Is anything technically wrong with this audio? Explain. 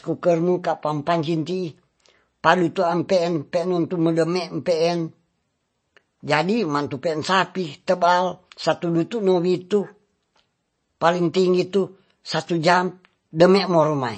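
Yes. MP3 compression damage runs through the whole speech clip, with nothing above 8.3 kHz and plainly audible artefacts. This is likely an encoder short of bits, which fits about 32 kbps. It cuts the treble at a fixed frequency and drops weak frequency lines that flicker from frame to frame, giving a watery, swirling texture.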